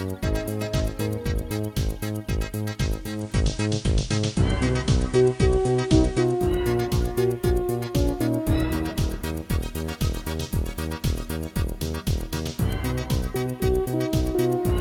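From 2.92 s to 6.61 s the receiver loses its digital signal and blends to the station's FM broadcast, then back. Each blend takes 0.44 s. The FM stretch brings faint hiss around 30 dB down and a level shift of about 4 dB.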